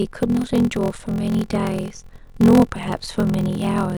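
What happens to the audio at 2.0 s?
A block size mismatch (padded) runs through the whole clip: zero-filled gaps in each block, consistent with a 1024-sample read size, produce a 43.1 Hz buzz and 0.861× speed.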